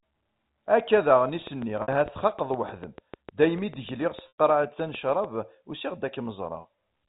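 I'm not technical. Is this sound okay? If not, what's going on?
No. From 1.47 to 5.25 seconds there is a train of clicks: about thirty evenly spaced ticks, roughly 6.6 per second, heard through the speech and in the gaps. Their steady, identical pattern points to interference from nearby equipment or a faulty connection or power supply as the likely cause, rather than random crackle.

There are also two moments of packet loss with pitch repetition, at 1.82 seconds (60 ms) and 4.28 seconds (100 ms). Pieces of the signal went missing, and the receiver filled each gap by repeating the last bit of voice. Unlike a click, this sounds like a brief buzzy, held tone that fades out. The longer second gap dips toward silence before the speech blends back in.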